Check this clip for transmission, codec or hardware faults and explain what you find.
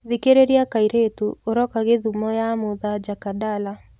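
No transmission, codec or hardware faults are audible here.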